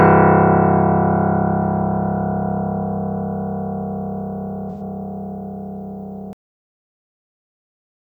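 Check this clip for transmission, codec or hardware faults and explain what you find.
Two faults are present in this recording of everyday sound.

From 4.70 to 4.81 s there is AAC frame loss with concealment. About 85 ms of coded audio never reached the decoder, which fits two lost frames. The decoder filled the gap from the last good spectrum, so the passage sounds briefly smeared and noisy instead of dropping out.

At 6.33 s there is a cut-off end. The final buffers were never written or played, so the sound stops abruptly in the middle of an event and falls straight to digital silence with no natural decay. That silence continues to the end of the clip.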